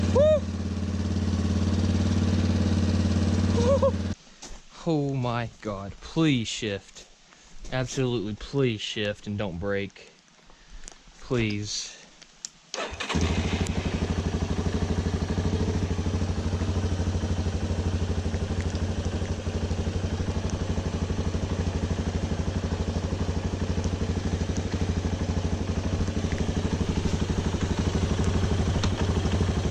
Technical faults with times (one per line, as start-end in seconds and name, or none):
none